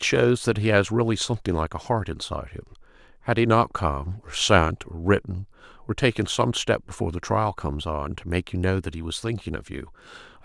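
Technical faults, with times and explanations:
No technical faults are audible anywhere in this speech recording.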